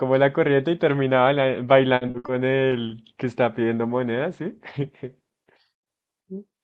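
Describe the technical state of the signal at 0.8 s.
At 0.8 s the speech signal is intact, with no audible technical fault at that moment.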